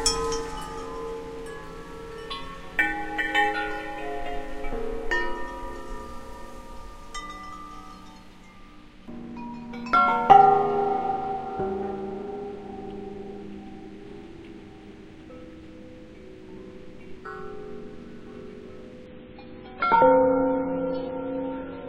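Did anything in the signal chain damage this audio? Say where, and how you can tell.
Yes, at the network and codec stage: the adaptive stream dropped to a lower bitrate at 19.06 s and stayed there to the end. The treble abruptly vanishes above 5.3 kHz with no gap and more smeary artefacts, consistent with a switch from about 128 to 16 kbit/s MP3.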